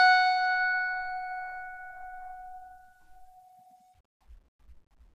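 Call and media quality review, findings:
Music clip reviewed; no audible faults found.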